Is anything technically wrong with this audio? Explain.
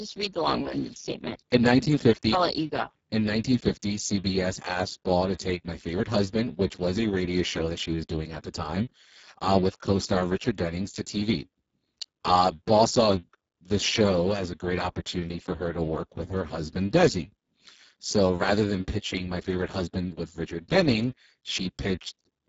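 Yes. Throughout the speech, Speex codec damage is heavy: too few bits for the excitation leave voices hoarse, noisy and close to robotic, which fits a bitrate near 6 kbps, and nothing reaches above 7.7 kHz. Unlike transform codecs' watery swirling, this is a buzzy, vocoder-like roughness.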